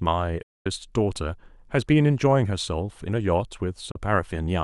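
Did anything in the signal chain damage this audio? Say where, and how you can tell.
Yes. A digital broadcast dropout at the reception stage: the speech fades out over about 8 ms, then goes silent from 0.42 to 0.66 s and again from 3.91 to 3.96 s. The receiver muted on lost or corrupt frames; both gaps fit 32 ms frames.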